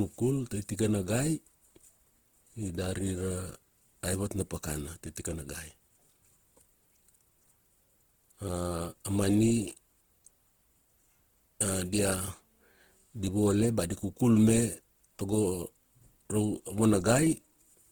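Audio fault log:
Throughout, Opus compression: the speech is rough and grainy, with a noisy, gritty texture on sustained sounds rather than swirling or hollow gaps, while the top end still reaches about 20.2 kHz. This is likely the music-oriented CELT mode working at a low rate, which fits roughly 16 kbps. With too few bits, the encoder keeps each band's energy but fills the fine detail with folded or noise content, which is what turns the tone grainy.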